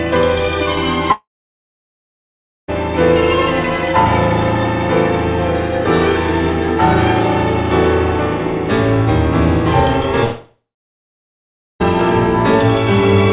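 At 1.12 s the sound smears into a brief fading buzz, then drops to near silence for about 1.4 s before resuming at 2.70 s. The same happens from 10.24 to 11.82 s, with about 1.15 s of silence. Each is likely a long network dropout: about 1.56 s of audio never arrived, and the receiver stretched the last sound briefly before going quiet. Through all of this, the call path's 4 kHz band limit fits G.711 A-law.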